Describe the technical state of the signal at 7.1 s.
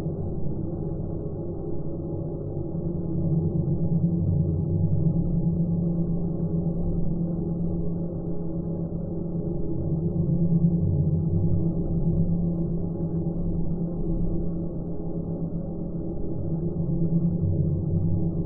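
Around 7.1 s the signal is intact, with no dropout, distortion or other technical fault at that moment.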